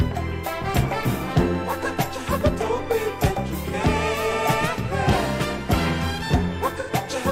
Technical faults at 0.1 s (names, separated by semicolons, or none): none